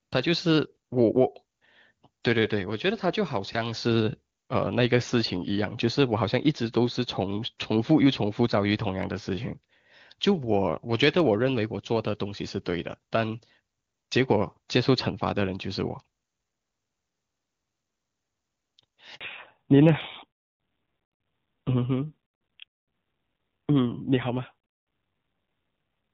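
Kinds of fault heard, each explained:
Handover gap: At 19.15 s the call switches networks and no speech frames arrive for about 60 ms. The sound dies away within a few tens of milliseconds, stays silent for that short stretch, and resumes once the new link carries audio. Anything said in between is lost.
Fallback to narrowband: From 19.21 s to the end, the call drops from HD Voice to a narrowband codec. Nothing above 4 kHz remains, so speech turns duller and rougher than the clean wideband section before it. The roughness fits a low-rate mode of around 7.4 kbit/s.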